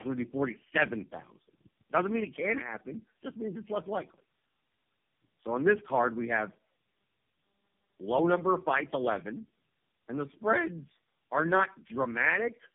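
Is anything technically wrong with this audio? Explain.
Yes. Tandem speech coding affects the speech throughout. It sounds like several narrowband speech codecs in a row, each recoding the previous one's degraded output. The result is rough, muffled, warbly speech with nothing above 3.4 kHz.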